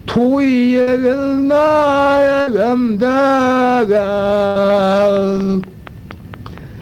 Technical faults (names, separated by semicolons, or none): burst of packet loss; train of clicks